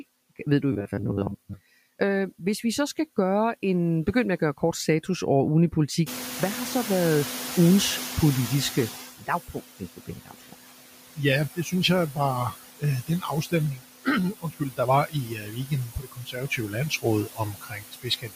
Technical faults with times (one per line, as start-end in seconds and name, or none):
0.00-18.36 noise suppressor artifacts
0.72-1.53 robotic sound from repeated short buffers
6.06-9.06 noise suppressor catching up
9.18-10.69 speech cut by the noise suppressor
11.55-11.73 speech cut by the noise suppressor
12.51-14.07 speech cut by the noise suppressor
14.39-18.36 speech cut by the noise suppressor